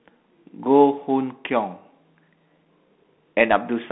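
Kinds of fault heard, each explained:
Bluetooth CVSD headset codec: The link encodes one bit per sample at 64 kbps with adapting steps, confining the speech to about 200 Hz to 3.5 kHz, with plainly audible grainy hiss and scratchy sibilants.
Bluetooth headset packet repeated: Lost voice packets were replaced by decoding the previous packet again, leaving a brief 7.5 ms repeated-buzz tick at 1.94 s, consistent with two dropped packets.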